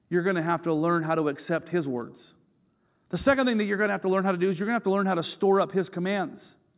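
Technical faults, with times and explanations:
No technical faults detected.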